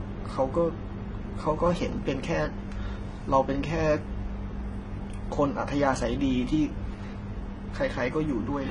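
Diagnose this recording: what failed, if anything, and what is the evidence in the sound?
Transcoding between lossy codecs runs throughout the speech, a codec-stage failure. The sound has a hard ceiling, with nothing above 10.5 kHz, and two kinds of damage are layered together: a smeared, synthetic top end and a grainy, swirling texture. That fits a low-bitrate HE-AAC encode at around 16 kbit/s, likely re-encoded to MP3 at around 40 kbit/s. The second encoder spent its bits on the first one's artefacts, added its own, and kept the lower cut-off.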